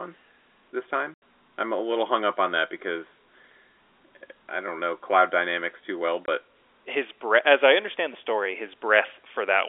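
Packet loss filled with silence hits at 1.14 to 1.18 s, just before "I'm a little hung", and at 6.26 s, between "cloud dynamics too well" and "his breath as I". Missing audio was replaced by digital silence, leaving hard-edged holes through the telephone-band sound, which fits a 20 ms packet.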